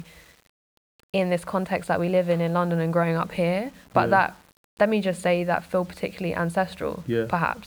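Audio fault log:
Throughout: low bit depth without dither. The speech carries a grainy, gritty edge that rides along with the signal, roughest on the quiet tails, where the sound sputters or drops out rather than fading smoothly. The error sits only around 35 dB below the signal and moves with it instead of forming a steady hiss. That's likely 8-bit audio rounded to the nearest step with no dither, so the quantisation error stays locked to the waveform.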